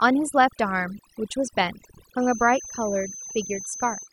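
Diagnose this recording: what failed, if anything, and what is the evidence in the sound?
Overdone noise removal at the call-processing stage runs throughout this speech. Background drops and breaks up into twinkling specks. A spectrogram shows scattered isolated bins and holes.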